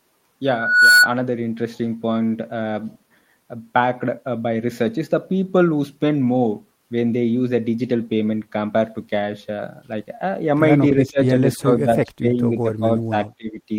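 From 10.93 to 11.36 s, then 11.57 to 12.44 s, 12.61 to 13.15 s and 13.38 to 13.69 s, the speech repeatedly sinks and breaks up in pieces, falling by roughly 15 to 25 dB at its deepest. This pattern is likely speech suppressed in double talk: an echo canceller mistook the talker for loudspeaker echo and attenuated both. On a waveform the envelope shows ragged notches; a spectrogram shows brief faded gaps.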